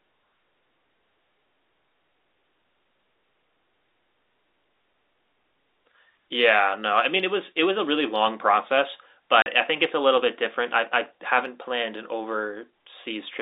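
Speech over a telephone-band line, with packet loss filled with silence at 9.42 to 9.46 s: a 40 ms hole with hard edges, fitting two lost 20 ms packets, unlike concealment's smoothed or repeated sound.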